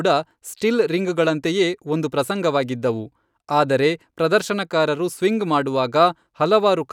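A speech recording with no technical fault to point to. There is nothing here that calls for a time or a cause.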